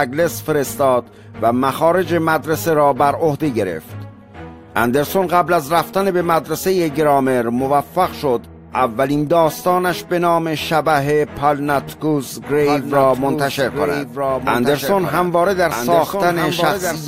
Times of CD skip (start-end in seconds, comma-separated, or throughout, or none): none